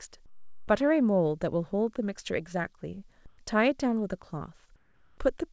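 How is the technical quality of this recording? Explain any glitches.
The recording has three short gaps where the background is replaced by comfort noise, heard over a call-style path whose sound stops at 8 kHz, which points to a wideband call codec such as G.722.

Comfort noise in place of the background appears from 0.26 to 0.68 s, from 3.26 to 3.38 s, and from 4.76 to 5.18 s. In each gap the recording's own background gives way to a smooth, featureless hiss: about 6 dB quieter in the first, about 1 dB louder in the second, and about 2 dB quieter in the third. The likely cause is discontinuous transmission: the sender goes silent when it detects no speech, and the receiver fills the pause with synthetic noise. Unlike a dropout or muting, the gap is never silent. Unlike a noise gate, the hiss continues at a steady level instead of falling away.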